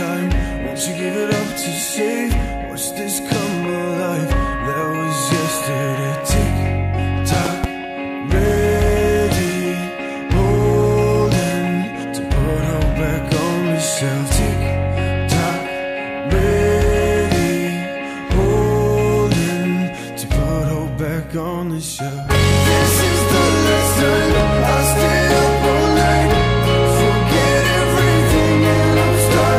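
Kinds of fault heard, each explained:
Hard clipping: The sound is driven about 10 dB past what a stage in the chain can pass, so every peak is sliced flat. Only a small share of the waveform, around 3 percent, actually hits the ceiling, which is why it comes across as a gritty crackle riding the louder moments rather than constant fuzz. Unlike a pop, it follows the loudness of the sound itself and is present throughout the clip.
Loud pop: Sharp bursts sit on top of the sound, which carries on unbroken beneath them. At 7.46 to 7.66 s there are two pops in quick succession, reaching roughly 20 dB above the surrounding level, and at 24.40 to 24.43 s a single pop about 15 dB up. They are most likely electrical transients from a plug, switch or static discharge. Unlike clipping, they are isolated events that do not depend on how loud the sound is.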